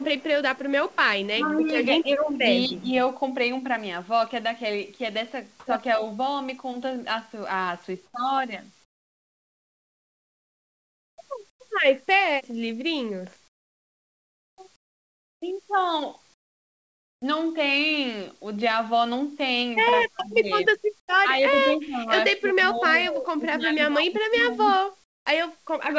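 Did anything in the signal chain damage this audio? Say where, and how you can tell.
Yes, and most of it sits in the call processing stage.

The far end's echo canceller was likely leaving residual loudspeaker pickup in its uplink, so this echo leak returns a faint delayed copy of the speech. It is heard from 0.00 to 0.24 s and 0.56 to 1.22 s, roughly 35 dB below the direct speech, and from 2.75 to 2.84 s, where it rises to about 20 dB down. The copy trails the original by 253 ms, a constant delay that identifies it as loudspeaker-to-microphone feedback rather than room reverberation.

The same canceller likely misjudged moments when both parties talked at once and attenuated the near talker along with the echo. This is speech suppressed in double talk. The speech dips at 1.32 to 1.68 s, 2.01 to 2.29 s and 2.68 to 2.91 s, by roughly 5 to 15 dB. From 20.1 to 24.83 s it is pushed down repeatedly for about 3 s in total, at worst around 25 dB. 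The level pumps in step with the overlap, not with anything the talker does.

Discontinuous transmission likely stopped sending audio in pauses, and the receiver substituted comfort noise in place of the background. This is consistent with RFC 3389 comfort noise. The background, normally about 40 dB under the loud passages, turns smooth and featureless at 8.06 to 8.14 s, 8.84 to 11.18 s, 11.50 to 11.60 s, 13.48 to 14.58 s, 14.76 to 15.42 s, 16.34 to 17.22 s, 21.00 to 21.08 s and 25.04 to 25.26 s. It drops by about 4 dB in the first gap and by about 14 to 26 dB in the others, then snaps back when speech resumes.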